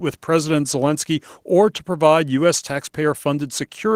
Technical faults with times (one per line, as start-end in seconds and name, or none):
0.00-3.96 Opus voice compression